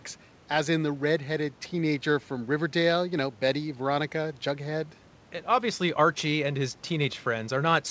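No technical faults are present in the speech: the faint room noise sits about 30 dB below the voice, and the call codec's band limit leaves nothing above 8 kHz, which fits a wideband G.722 link.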